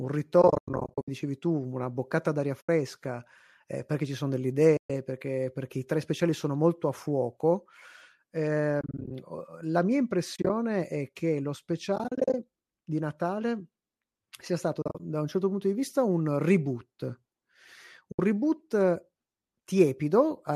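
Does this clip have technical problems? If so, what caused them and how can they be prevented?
Yes. The speech has AAC frame loss with muting at 0.42–1.08 s, 2.61–2.69 s, 4.77–4.90 s, 8.81–9.11 s (just before "la mia"), 10.36–10.50 s (before "è che lo"), 11.96–12.34 s, 14.82–15.00 s and 18.12–18.19 s. These are soft-faded gaps of roughly 10 ms units, likely from the low-delay AAC stream, where missing frames were zeroed. Unlike a hard dropout, they fade out and back in. Packet loss concealment and forward error correction would prevent them.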